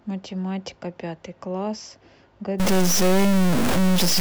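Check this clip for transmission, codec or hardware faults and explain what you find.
One hardware fault is present: a stuck bit running from 2.60 s to the end of the clip. From that point one data bit in the samples is most likely jammed at a fixed value, perhaps by a broken data line or converter. About half the sample values are pushed off by that bit's weight, roughly -15 dBFS, fairly high in the word. The speech turns harsh and buzzy, and because the error flips with the sign of quiet samples, the pauses fill with loud noise.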